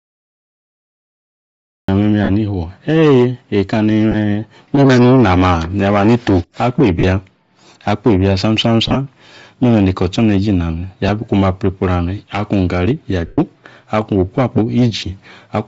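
Speech, with a breathy, grainy edge and a dulled top end throughout, likely from LC3 Bluetooth compression at a low bitrate around 32 kbps. It's a cut-off start: digital silence until 1.88 s, then the speech jumps in mid-sound with no natural attack. Lost LE Audio frames cause brief noisy smears at 2.24 s (45 ms), 4.11 s (22.5 ms), 6.99 s (37.5 ms), 8.88 s (scattered over 75 ms, longest gap around 30 ms), 11.08 s and 13.27 s (112.5 ms, fading out).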